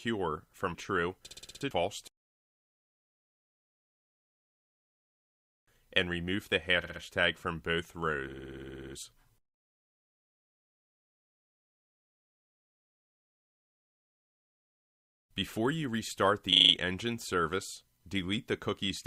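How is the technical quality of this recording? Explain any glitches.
The recording has a stutter problem: repeated frames at 1.26–1.62 s, 6.82–7.01 s, 8.28–8.95 s and 16.52–16.73 s. A 60 ms chunk (40 ms in the last one) gets replayed in a loop, 3 to 11 extra times, so you hear a machine-gun stutter, and the clip runs longer by those replays.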